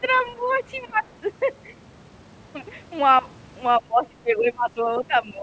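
Other side's voice leaking through, from 0.02 to 0.55 s and again from 0.77 to 0.93 s: a faint second voice sits under the speech, roughly 25 dB below it at first and about 30 dB below in the shorter scrap. The likely cause is a loudspeaker on the talker's end playing the far side into the microphone, with the echo canceller leaving some of it in place.

Speech suppressed in double talk, from 0.87 to 1.05 s and from 3.79 s to the end: the talker's speech sinks by as much as about 20 dB. The early dip lasts around a fifth of a second and overlaps the tail of the leaked voice. The likely cause is the echo canceller facing both sides talking at once, failing to tell its own talker from the echo, and turning everything down. The speech fades, with the high end already capped at 8 kHz by the G.722 call path.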